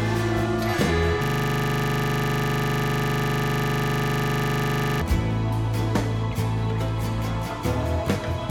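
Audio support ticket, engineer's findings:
Music clip. System hang loop, 1.24 s to 5.02 s. A 40 ms slice of audio repeats exactly, about 94 times. It comes across as a steady buzz at 25 Hz, not a stutter. Probable component: host or audio driver freezing. Mechanism: output hardware kept replaying the same ring buffer, which fits a buffer about 40 ms long. Playback resumes after 5.02 s.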